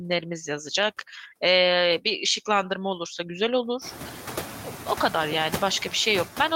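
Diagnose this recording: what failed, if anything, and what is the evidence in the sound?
Noise suppressor artifacts run through the whole speech clip, a call-processing fault. The suppressor estimates which frequency bands hold steady noise and lowers them frame by frame, so the background dips in the gaps and returns under the speech. Here the reduction is only about 2 dB, a light touch. It matters most after the room noise climbs by about 21 dB around 4 s and sits only about 14 dB below the speech.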